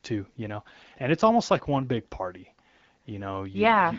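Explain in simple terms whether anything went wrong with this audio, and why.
Nothing went wrong here; no faults can be heard.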